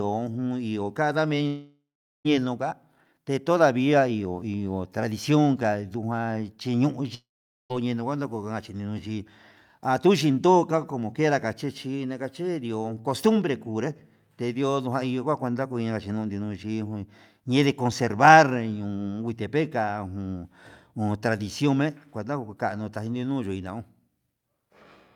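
At 1.47 to 2.27 s and 7.15 to 7.72 s, speech smears into a fading buzz, then silence, likely a long network dropout; spectrograms show decaying streaks before a blank gap.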